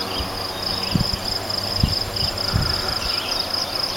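No technical faults can be heard anywhere in the audio.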